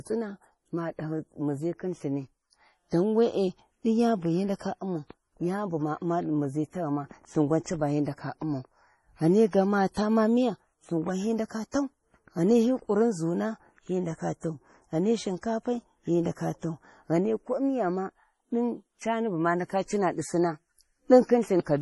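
Throughout, the speech stops dead above 11.5 kHz and sounds heavily watery and swirly, with smeared onsets. The likely cause is MP3 compression at a bitrate around 32 kbps, with weak frequency lines dropping out frame to frame. A spectrogram shows a flat ceiling with flickering holes beneath.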